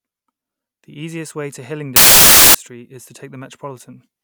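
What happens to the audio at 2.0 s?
Just after "easiest way to", the speech turns into loud, harsh broadband noise from 1.96 to 2.55 s. These are samples built from the wrong bytes: misassembled bytes push each sample's fast-changing low bits into its most significant part.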